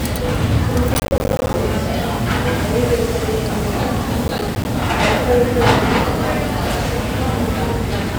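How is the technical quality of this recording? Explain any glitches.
The recording suffers from processor overload crackle in two bursts, from 0.94 to 1.6 s and from 4.23 to 4.65 s. In each burst the processor fell behind and repeatedly missed its deadlines for short audio buffers, which the gap spacing suggests were about 10 ms long. Each missed buffer dropped out to silence with abrupt edges. Strung together, these gaps produce a gritty, tearing crackle over the sound. The first burst is longer and denser, and both stop once the load eases.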